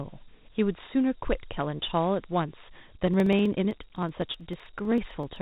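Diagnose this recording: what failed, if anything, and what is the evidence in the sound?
At the codec stage, the speech passed through Dialogic VOX ADPCM, the 4-bit adaptive coding used for phone menus and voicemail. Each sample is stored as a 4-bit step relative to a predicted value, and coarse step sizes leave a gritty hiss that rises and falls with the speech throughout. The hiss is plainly audible here. Nothing remains above 3.8 kHz, which fits an 8,000-samples-per-second file at roughly 32 kbps.

At the driver or buffer stage, periodic USB or driver dropouts begin at 3.01 s and continue to 5.36 s. Something blocked the audio path every 63.5 ms, and each time about half a millisecond of audio was skipped outright rather than filled with silence. Each skip joins the waveform on either side of the gap, leaving a small discontinuity. The result is a steady train of around forty ticks, heard only where speech is present.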